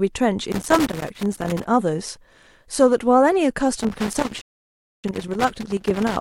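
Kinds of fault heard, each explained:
Loose connector crackle: irregular scratchy crackling from 0.52 to 1.66 s and 3.80 to 6.17 s, a worn contact rapidly making and breaking the signal.
Rebuffering stall: the sound cuts to silence at 4.41 s for 624 ms, then resumes exactly where it stopped, because the player ran out of downloaded audio.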